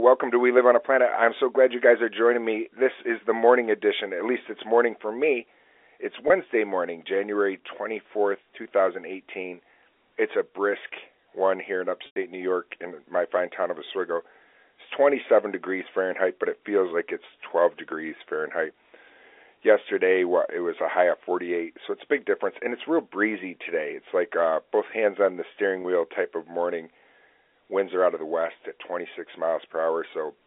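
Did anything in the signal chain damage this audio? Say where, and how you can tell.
Yes. Network packet loss with pitch repetition: the receiver bridged gaps by repeating the last pitch period, heard as brief buzzy holds at 6.28–6.30 s and 25.82–25.84 s (after "hands on the steering"), and fading toward silence at 12.06–12.16 s, after "brisk one here in".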